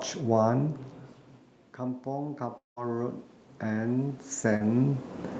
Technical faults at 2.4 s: automatic gain rising

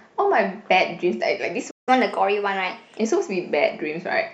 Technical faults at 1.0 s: none

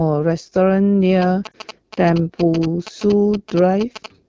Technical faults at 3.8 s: AMR wideband (HD Voice) codec; GSM signalling bursts

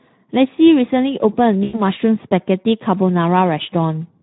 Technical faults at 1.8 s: Speex codec; VoIP packet loss concealed by the speech codec

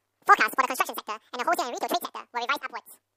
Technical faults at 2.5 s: audio read two samples at a time (double speed)

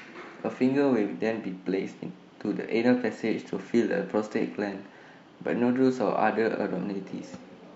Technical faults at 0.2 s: none

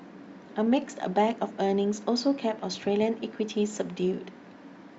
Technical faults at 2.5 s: none

